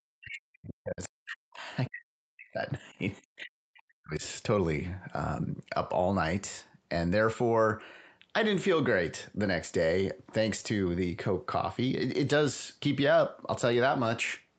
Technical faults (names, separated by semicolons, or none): speech suppressed in double talk; other side's voice leaking through